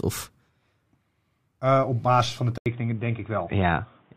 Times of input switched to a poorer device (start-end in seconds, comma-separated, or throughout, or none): 2.58-4.17